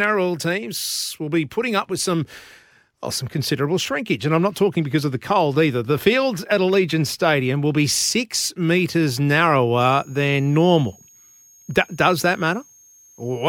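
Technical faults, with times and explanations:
9.80–13.48 s switching supply whistle: a power supply's audible tone drifting between 6.4 and 6.8 kHz, roughly 30 dB below the speech, appears as a thin wavering spectrogram line.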